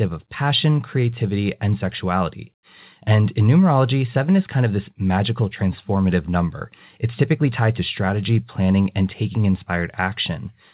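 This is speech with nothing technically wrong with it; it carries nothing above 4 kHz, which fits a narrowband call path such as G.711 mu-law.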